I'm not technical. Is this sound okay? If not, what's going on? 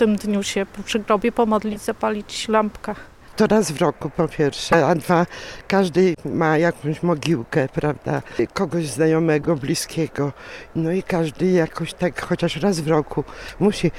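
No. In a few places the compressed audio data got damaged, and the player decoded it anyway (a corrupt frame decoded). Each damaged piece produces a brief chirp or burst of noise, at 1.72, 4.72, 6.14, 9.41 and 13.48 seconds. The one at 4.72 is the loudest.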